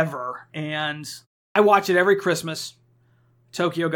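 At 1.49 s the speech returns from a short pause of about 0.3 s with its onset missing: the first 65 ms are swallowed, so "watch it every" starts abruptly out of silence. This is a clipped start after a pause, where the output device dozes during silence and needs time to wake again.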